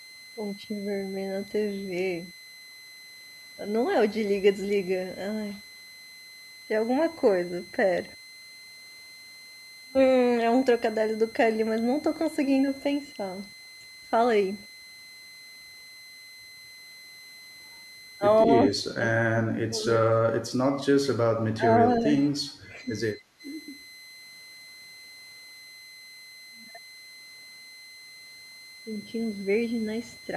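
A switching supply whistle runs through the whole speech clip, a thin steady tone near 2.0 to 2.1 kHz sitting roughly 20 dB below the talker, from a power converter whose switching frequency has dropped into the audible band and leaks onto the audio path. Speech suppressed in double talk follows at 18.68–20.03, 20.88–21.27, 21.53–22.27, 22.68–22.86 and 23.40–23.44 s: the talker's level collapses in pieces, by about 25 dB at first, then around 20 dB, then only about 10 dB, most likely because an echo canceller mistook near-end speech for loudspeaker echo and attenuated it.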